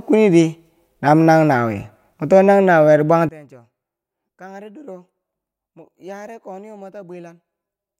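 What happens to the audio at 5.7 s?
One channel inverted, from 3.29 s to the end of the clip, covers the moment at 5.7 s. Just after "mwe to nang nawuyeri", the speech drops by about 23 dB and turns faint. The likely cause is that one stereo channel has flipped polarity, so when the two channels are summed to mono, the centred speech they share cancels out. What survives is only the small difference between the channels, a weak remnant.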